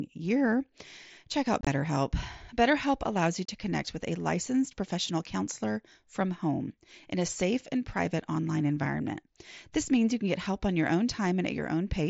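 Speech carried over a Bluetooth headset link with unconcealed Bluetooth headset packet loss. Between 1.61 and 1.67 s about 45 ms of audio drops out in bursts scattered over 60 ms, the longest hole 22.5 ms, giving a brief chopped crackle. From 3.45 to 3.49 s 30 ms more is lost. Lost packets were replaced by silence or an idle pattern rather than concealed, so the waveform shows holes with sharp edges, and the spectrogram shows blank vertical slots, all within the mSBC codec's 8 kHz wideband ceiling.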